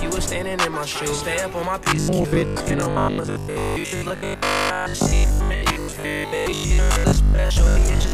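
From 1.84 s to 8.12 s the sound takes on a rigid, metallic 50 Hz buzz, heard as robotic sound from repeated short buffers. Audio likely arrived too slowly, so a 20 ms segment was looped to fill the gaps, with most of the real signal skipped.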